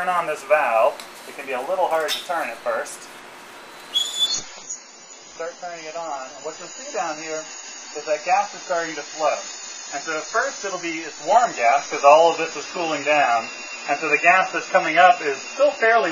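At 4.27 s the adaptive stream switched to a lower bitrate, fitting about 16 kbit/s; the sound abruptly loses everything above 7 kHz.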